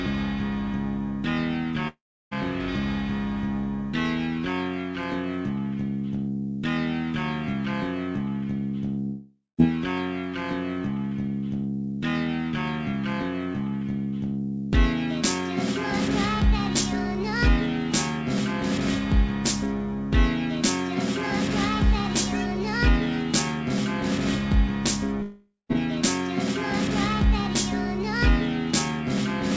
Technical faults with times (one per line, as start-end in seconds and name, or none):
1.88-2.33 long network dropout
9.05-9.60 long network dropout
25.22-25.71 long network dropout